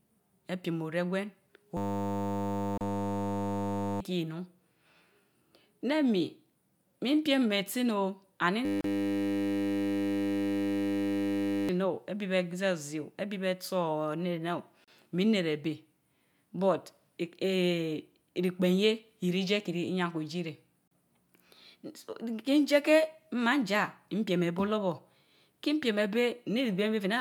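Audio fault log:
1.77–4.00 s and 8.65–11.69 s, system hang loop: The speech gives way to a steady buzz pitched at 100 Hz. The machine or its driver stalled while the sound hardware kept replaying one 10 ms stretch of its ring buffer, 220 times in the first run and 300 in the second. Because the buffer is so short, the repeats merge into a tone rather than a stutter. About two seconds and then about three seconds of real audio never reach the output.
2.78, 8.81, 14.84 and 20.88 s, gap at a join of encoded pieces: A dropout of about 33 to 34 ms cuts through the sound every 6 s. The first two fall inside the buzzing stretches. The audio was encoded in separate pieces and spliced without trimming, so each join keeps the encoder's start-up delay and the padding of the previous piece's last frame. The result is a brief silence with smeared edges, after which the sound resumes where it left off.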